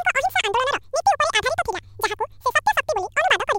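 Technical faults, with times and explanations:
Throughout, audio read two samples at a time (double speed): the speech plays at twice its proper rate and an octave high, because the player treats each pair of samples as a single frame, as if the stream held two channels or wider samples. Strong content above the reduced Nyquist limit folds back. On a spectrogram, harmonics sit twice as far apart, while the waveform shows compressed, squeezed syllable envelopes.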